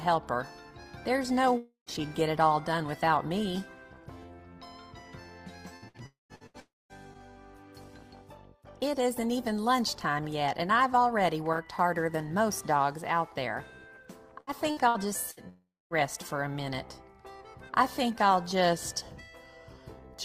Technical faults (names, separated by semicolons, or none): long network dropout; repeated packet loss (robotic sound)